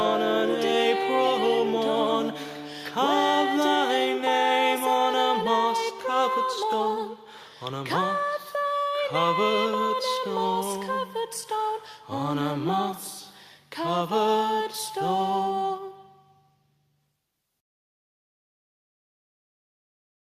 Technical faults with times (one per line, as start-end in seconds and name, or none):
none